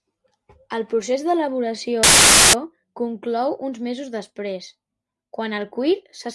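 Speech, with one fault: file tags played as audio from 2.03 to 2.53 s, just before "conclou uns mesos després". An embedded cover picture's compressed bytes were read as samples, giving half a second of very loud white noise. The waveform shows a solid block with hard edges, and the spectrogram shows flat broadband energy.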